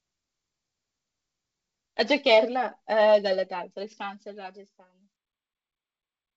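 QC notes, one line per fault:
The speech fades out smoothly from roughly 3.5 s onward and carries nothing above 8 kHz, a bandwidth that fits a G.722 call path at 64 kbps, with no faults heard.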